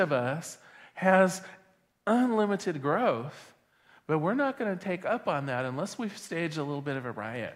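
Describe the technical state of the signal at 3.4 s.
At 3.4 s the speech signal is intact, with no technical fault present at that moment.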